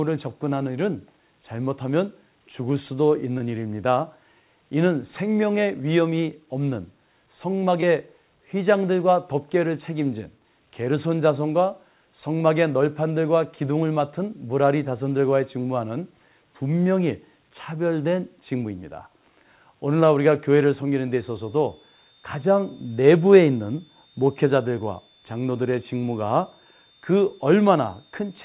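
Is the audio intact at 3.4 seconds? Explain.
No. From 3.38 to 3.41 s there is a short concealed packet loss. About 20 ms of the call arrived too late for the decoder, and the receiver covered the gap by extending the preceding sound, as a repeated pitch cycle if voiced or as shaped noise if not, before blending back into the real signal. It is heard as a brief smear or wobble on narrowband audio that stops at 4 kHz, which fits a G.711-type call codec.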